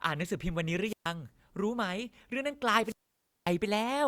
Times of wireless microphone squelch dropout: 0.84-1.11, 2.83-3.54

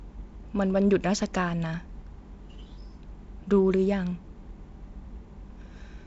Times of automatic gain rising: none

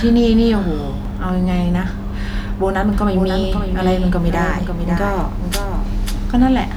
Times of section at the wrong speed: none

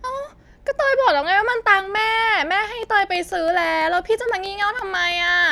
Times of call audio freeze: none

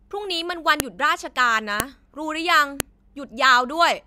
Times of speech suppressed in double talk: none

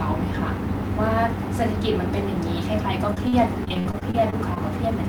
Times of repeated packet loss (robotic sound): 3.14-4.58

